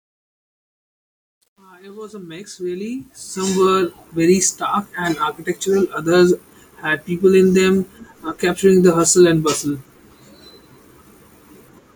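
A speech recording opens with a fade-in from the start to 3.85 s that shows truncation distortion: the rising level is rendered with too few bits and no dither, so the quiet part, worst from 0 to 2.76 s, sounds gritty. The coarseness fits roughly 10-bit resolution. The fade settles just before "very stark and architectural".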